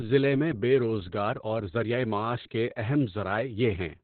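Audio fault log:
Throughout: Opus voice compression, and it's a heavy one. Nothing gets through above about 4.2 kHz, so the speech sounds boxed-in and muffled, like an old phone line. That narrowband cut is what the codec does when starved for bits; the squeeze fits a bitrate around 8 kbps. The linear-prediction coder is rebuilding the voice from a rough excitation signal, which is why it comes out hoarse, buzzy and a bit robotic.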